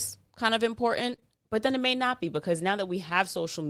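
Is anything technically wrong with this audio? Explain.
Yes, there are two kinds of packet-loss fault, clustered between 1.07 and 1.24 s.

From 1.07 to 1.13 s, just after "kind of", there is a lost packet rebuilt from error correction. About 40 ms, consistent with two separate packets, was replaced by the low-bitrate redundant copy carried in the following packet. There is no gap, but that stretch sounds rougher and noisier.

Two short concealed packet losses follow, from 1.15 to 1.20 s and from 1.20 to 1.24 s, immediately before "but then it may". Each hole is about 20 ms. The decoder extrapolated the preceding sound and then crossfaded back into real audio, leaving a brief smear or wobble.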